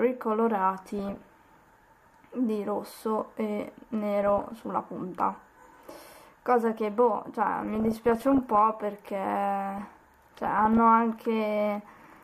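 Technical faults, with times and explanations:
0.78–1.75 s, 4.23–4.65 s, 7.63–8.57 s and 9.78–10.77 s, DAB burbling: four bursts of burbling over the sound. Weak reception let bit errors, around 1.5 percent at worst and less in the other three bursts, slip past error correction into the MP2 stream. Corrupted samples put short noise blips in single sub-bands and corrupted scale factors make individual sub-bands jump in level for up to a frame, which fits roughly 20 to 42 damaged frames per burst.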